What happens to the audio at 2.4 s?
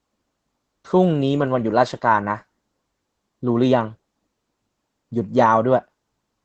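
At 2.4 s the speech carries Opus voice compression, present through the whole clip: the linear-prediction coder sends nothing above 8.5 kHz and codes the excitation coarsely, which fits a low bitrate near 12 kbps. A plain low-pass filter would only muffle the speech; this also makes it hoarse and slightly robotic.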